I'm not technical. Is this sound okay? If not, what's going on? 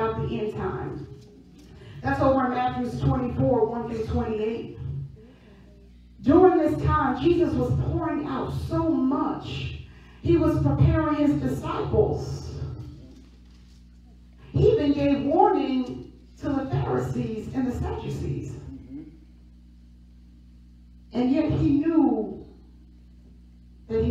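Yes, this sound is okay. Nothing in it points to a technical problem that needs explaining.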